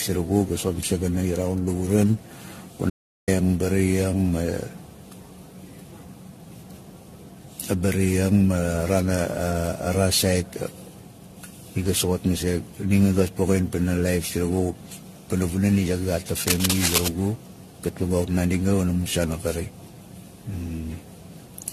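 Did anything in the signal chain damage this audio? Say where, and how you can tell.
Yes, three separate problems. The whole clip has generation loss at the codec stage. Nothing survives above 14.1 kHz, and the speech sounds swirly, hollow and smeared, with softened consonant attacks. That's worse than a single 64 kbit/s AAC-LC pass would give you. It points to the audio likely having been decoded and re-encoded around ten times, each pass requantising on a shifted frame grid so the noise and spectral holes stack up.

At 2.90 s the signal cuts to dead digital silence until 3.28 s, so about 0.38 s is missing. This is an audio dropout to silence. You can tell because even the room tone vanishes, which means something downstream kept writing silence. The likely cause is the input being lost for a moment, through a device disconnect, a failed link or a brief mute, while the recorder carried on. 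Whatever was said in that gap is gone.

From 16.47 s to 17.08 s there's a burst of dense, irregular scratching and rustling sitting right on top of the speech, at about the same level as the voice. That's cable scratch noise, from the analogue wiring. The likely cause is a worn cable, connector or control being moved, so its contact resistance jumps around quickly and injects those ragged bursts. It stops within about 0.6 s.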